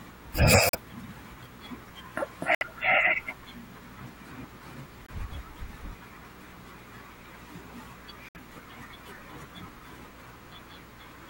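Video or display buzz runs under the whole speech clip, around 25 dB below it. It sits at 59.94 Hz rather than mains frequency, with hash above and a thin 15.7 kHz line-rate whine.

Corrupt frame muted gaps appear at 0.68–0.75 s, 2.55–2.63 s, 5.05–5.10 s and 8.29–8.38 s. The decoder rejected damaged frames, so each gap is sudden silence of a few frame lengths. Unlike a dropout, no time is lost.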